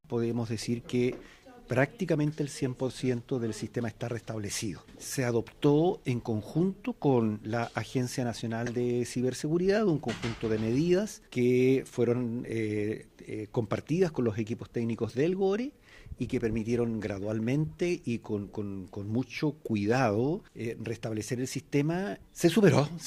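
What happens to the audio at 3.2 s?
At 3.2 s the audio plays through intact, with no dropout, click, distortion or other fault at that moment.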